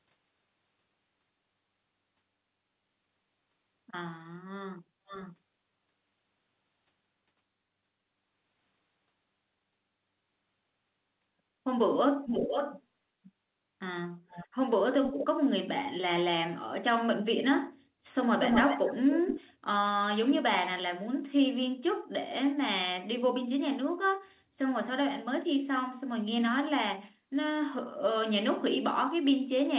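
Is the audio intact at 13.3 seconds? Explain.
No. From 13.24 to 13.3 s there is an echo leak: a faint, delayed copy of the speech, arriving about 510 ms behind the original and roughly 30 dB below it. It is likely caused by a loudspeaker on one side whose echo canceller let a scrap of its microphone pickup slip back into the call. On a spectrogram it would appear as a weak smear repeating earlier harmonic patterns, capped at 4 kHz like everything else on this call path. On the waveform it is barely visible.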